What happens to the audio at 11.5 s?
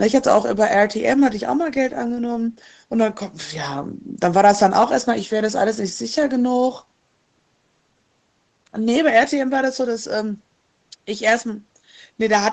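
At 11.5 s the speech is intact, carrying only the steady band limit near 8 kHz from the call's microphone processing and Opus coding.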